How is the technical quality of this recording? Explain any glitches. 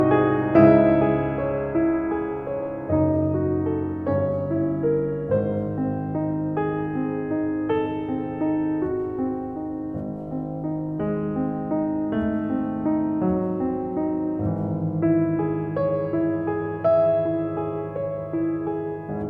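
The technical quality of this music recording holds up, with no glitches to report. Nothing in the audio calls for an explanation.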